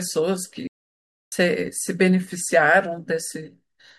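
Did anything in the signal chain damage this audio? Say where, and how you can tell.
Yes. An audio dropout to silence: the input device likely disconnected while recording continued, so speech cuts to complete silence, without room tone, from 0.67 to 1.32 s.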